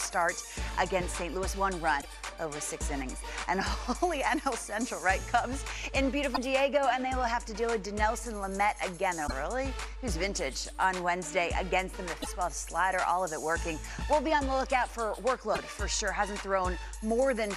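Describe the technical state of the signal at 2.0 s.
At 2.0 s the MP3 stream likely lost frames, breaking the bit reservoir: following frames reach back for borrowed data and decode another frame's bytes. From 2.0 to 2.06 s the audio jumps ahead, and the disruption, spanning about two 26.1 ms frames, comes out as a chirp, noise burst or short hole.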